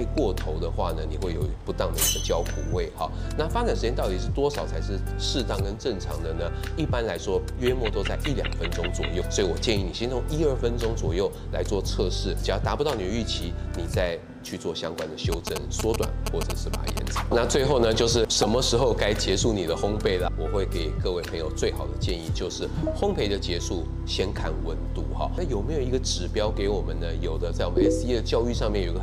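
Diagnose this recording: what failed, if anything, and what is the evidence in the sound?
GSM signalling bursts, 15.32 to 16.99 s: analogue wiring rectifies a nearby phone's radio bursts into galloping 217 Hz buzzes near signal level, seen as vertical spectrogram stripes.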